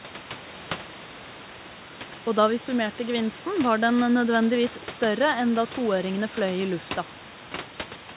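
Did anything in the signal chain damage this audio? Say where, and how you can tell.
No, nothing in the signal chain stood out as a problem on listening.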